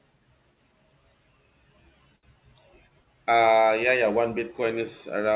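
From 2.16 to 2.35 s, a short stall from a late packet holds one sound about 68 ms too long. The jitter buffer emptied and stretched the last sound, then resumed with nothing lost. A spectrogram shows briefly flat, repeating harmonics below the call path's 4 kHz ceiling.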